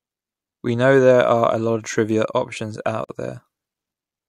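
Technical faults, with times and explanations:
3.04 to 3.09 s, gap at a join of encoded pieces: a gap of about 47 ms cuts into the speech, where separately encoded chunks were butted together with their padding left in.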